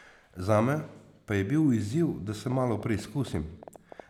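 From 2.52 s to 4.01 s the speech carries a train of clicks, around fifteen sharp pulses at an average of 8.8 per second but unevenly spaced. Each click has much the same brief, popping shape and pokes out a few decibels above the speech, so the ticking stays audible through the pauses too. The likely cause is interference from nearby equipment or a faulty connection or power supply. On a waveform they show as narrow spikes; a spectrogram shows thin vertical lines spanning all frequencies.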